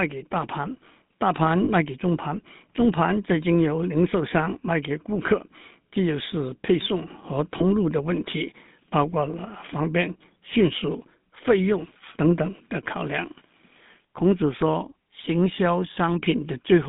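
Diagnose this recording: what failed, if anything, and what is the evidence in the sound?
The codec stage is the culprit here. The speech runs through a GSM full-rate codec the whole way, and the damage is plainly audible: a buzzy, gravelly grain on the voice, with the line band squeezed to roughly 150 Hz to 3.6 kHz. That grit comes from the encoder modelling the vocal tract and exciting it with a sparse, regularly spaced pulse train, which fits the old 13 kbps full-rate mode.

There are also lost GSM frames, a network or transport problem on top of the codec. At 1.64 to 1.70 s you get about 40 ms of held, metallic ringing, which fits two 20 ms frames going missing. A shorter one hits at 7.58 to 7.62 s, about a single frame's worth. In each gap the decoder keeps replaying the last good frame's settings, so the sound smears into that rough ring.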